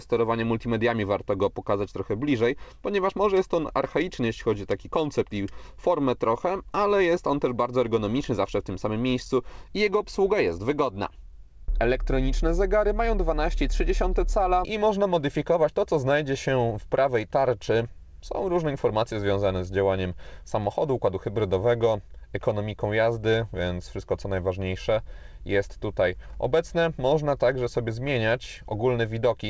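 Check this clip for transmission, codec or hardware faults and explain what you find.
No transmission, codec or hardware faults turn up anywhere in this clip. The audio has come through a call path that sounds like a wideband codec such as G.722, so there is nothing above 8 kHz and the top end is rolled off accordingly.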